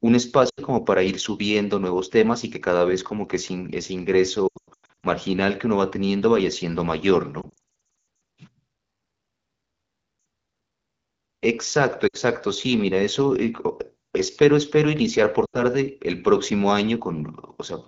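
Lost AMR speech frames interrupt the clean wideband speech five times, at 0.49–0.61 s, 4.48–5.06 s, 7.41–7.58 s, 12.07–12.16 s and 15.46–15.63 s. Radio errors corrupted the frames, and the decoder filled each gap by repeating the last good pitch and vocal tract settings at falling gain. The short gaps, around 60–80 ms, drop briefly to near silence. At 4.48 s and 7.41 s the losses come in scattered runs up to 100 ms, so the speech drops to near silence within two frames and returns rough. On a spectrogram the harmonics freeze flat and thin out toward silence, and the waveform envelope sags before recovering.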